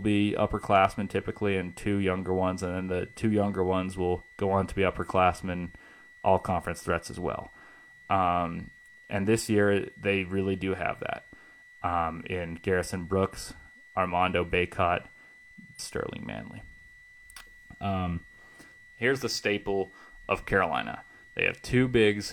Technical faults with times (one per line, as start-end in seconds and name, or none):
0.00-22.32 switching supply whistle
15.75-15.80 stream segment skipped